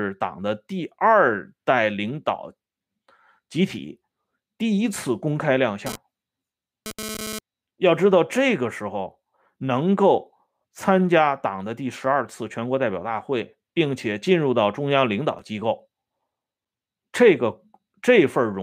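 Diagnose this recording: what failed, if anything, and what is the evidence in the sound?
GSM phone buzz, picked up in the analogue wiring: from 5.86 to 7.39 s a hard, raspy buzz sits about 10 dB below the speech. A nearby 2G phone transmitting data in bursts 217 times a second lets the audio circuit rectify each radio pulse, so the buzz is unrelated to the speech and stops when the transfer does. A spectrogram shows a dense comb of harmonics at multiples of 217 Hz across that stretch, and the waveform carries a regular train of square-edged pulses.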